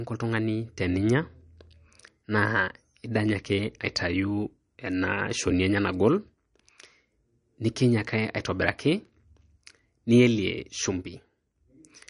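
Speech, with plainly audible MP3 compression throughout. Nothing sounds above 10.6 kHz. The damage likely comes from low-bitrate encoding, which fits about 44 kbps.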